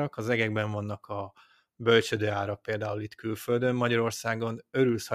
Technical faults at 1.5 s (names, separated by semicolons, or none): none